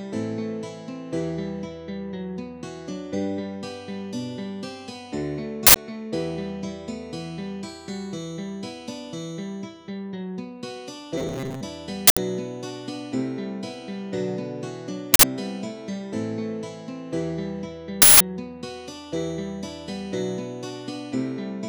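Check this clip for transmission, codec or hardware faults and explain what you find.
Two kinds of fault are present: four uninitialised-buffer bursts and one stretch of robotic buzzing.

Uninitialised buffer, at 5.67–5.76 s, 12.07–12.17 s, 15.14–15.23 s and 18.02–18.20 s. In each, a block of leftover memory was played instead of audio, replacing the sound with a burst of digital noise. The first three last about 93 ms, which fits a 4096-sample buffer. The last lasts about 186 ms, which fits an 8192-sample buffer. Unlike a dropout, these are not silent gaps. The noise is unrelated to the surrounding sound and starts and stops abruptly.

Robotic sound from repeated short buffers, at 11.18–11.63 s. For this stretch the audio becomes a rigid, metallic buzz at 134 Hz that only roughly follows the original, with about half the material repeated rather than new. The likely cause is audio arriving too seldom, so the software loops the last fragment of about 7.5 ms (one over 134 Hz) and skips real audio. 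The imposed fixed-rate buzz is what sets it apart from the noise bursts.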